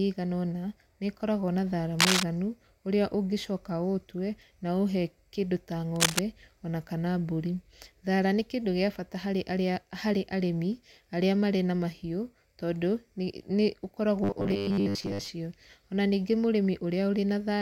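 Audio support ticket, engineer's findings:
Cable scratch noise, 1.99–2.24 s and 5.95–6.20 s: rustling bursts about 5 dB over, then level with, signal. Likely worn connector. Spectrogram: ragged broadband smears.

Robotic sound from repeated short buffers, 14.24–15.29 s: rigid 100 Hz metallic buzz, most audio skipped. Likely late buffer delivery, fits 10 ms buffer. Spectrogram: evenly spaced harmonic lines.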